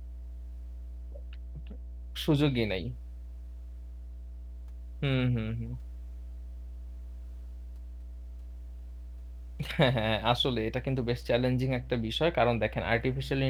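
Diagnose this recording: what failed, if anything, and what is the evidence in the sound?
Mains hum runs under the speech for the whole clip: a steady, fairly prominent 60 Hz drone. That's analogue wiring, a ground loop or nearby transformer leaking power-line current in.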